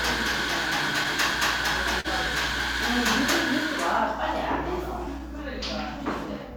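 Clock drift between sender and receiver runs through the whole clip. The sending side's clock is slow by about one and a half percent, so the receiver's buffer keeps draining and the receiver has to pad it out. The result is faint, irregular timing hiccups across the sound. On a waveform these appear as occasional tiny seams or doubled fragments. On a spectrogram they show as brief vertical discontinuities scattered at uneven spacing.

At 2.00 s to 2.07 s there is a short stall from a late packet. A packet missed its slot, the buffer ran dry, and the receiver held the preceding sound for 40 ms until the data arrived. It then resumed from the same point, so nothing is lost, but playback from here sits 40 ms later. It sounds like a brief smear with a slight buzzy hold. A spectrogram shows frozen, horizontally stretched partials, and the waveform shows a periodic repeating segment.

From 4.19 s to 6.40 s come repeated timing corrections. 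The receiver plays this stretch at 98% speed, repeatedly inserting small slices to keep pace with the slow sender, and adds around 50 ms in total. All the edits push the same way but at uneven gaps. If heard at all, they come across as a faintly dragging, slightly unsteady tempo. The waveform shows duplicated short cycles at intervals, and the spectrogram shows tiny repeated columns.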